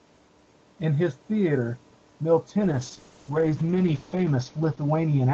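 A call bitrate drop hits this speech clip from 2.63 s to the end. Speech turns rough and watery, as though the call's bandwidth estimate collapsed and the encoder's bitrate fell from around 32 kbps to about 7 kbps. At that lowest point, which lasts 1.71 s, Opus codes coarsely and loses detail under the usual 8 kHz call band limit.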